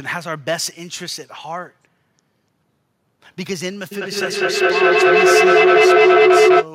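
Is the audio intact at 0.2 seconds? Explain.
Yes, the audio at 0.2 seconds is intact, with no audible fault at that moment.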